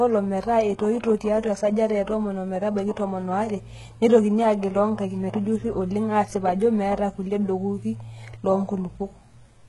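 Throughout, s sounds are gritty and metallic, likely heavy HE-AAC compression near 12 kbps. A spectrogram shows blocky, copied-looking treble ending sharply at 11.5 kHz.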